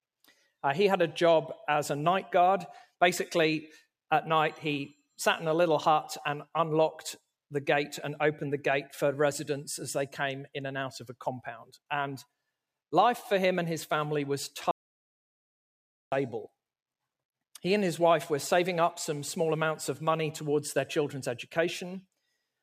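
The audio input was likely lost for a moment, through a dropped connection or an unintended mute, while the recording carried on writing silence. The result is an audio dropout to silence from 14.71 to 16.12 s: the sound stops abruptly, roughly 1.4 s of dead silence follows with no room tone, then the sound resumes mid-flow with that stretch missing.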